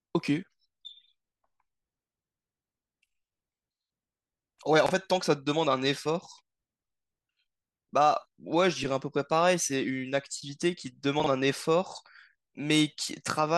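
At 4.86 to 4.91 s and 11.20 to 11.26 s, chunks out of order: 21.33 ms chunks play late, causing jumbles. Unlike dropouts, nothing goes missing.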